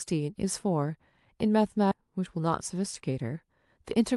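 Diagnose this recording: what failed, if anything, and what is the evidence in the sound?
In transit or at the network jitter buffer, a stretch of waiting audio was dropped in a skip ahead at 1.91 s. About 0.7 s of speech is missing, and the two sides are spliced with no gap.

The jitter buffer then applied a speed-up from 2.02 to 4.12 s, trimming pitch periods to drain roughly 0.2 s of excess delay. Speech runs 9% fast at unchanged pitch, sounding hurried.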